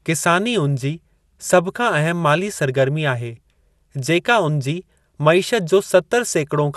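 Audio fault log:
Throughout: MP2 compression, likely at a low bitrate near 80 kbps. Sub-bands above 12.2 kHz are shut off, and the bands that remain flicker and gurgle. A spectrogram would show a hard ceiling at 12.2 kHz.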